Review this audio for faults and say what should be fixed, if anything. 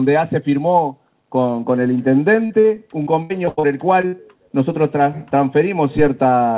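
Short concealed packet loss occurs at 2.46–2.52 s, 2.60–2.66 s and 4.01–4.05 s. About 40 ms of audio failed to arrive in the first two gaps and 20 ms in the third. In each case the receiver extended the preceding sound to cover the hole, leaving a brief smear or wobble.

Repeated packet loss (robotic sound) runs from 3.02 to 3.65 s. Five separate gaps there total about 260 ms, the longest 83 ms, so roughly 40% of that stretch is patched-in continuation. The back-to-back concealment sounds choppy.

A burst of packet loss follows at 4.07–4.15 s, right after the third short gap. About 60 ms went missing, and the concealed sound was held and faded, heard as a dying buzz or hiss before the audio resumes further on.

The band-limited call path, with nothing above 4 kHz, sits underneath all of this. To prevent these faults, fix the network path's loss and jitter, and enable forward error correction or a larger adaptive jitter buffer.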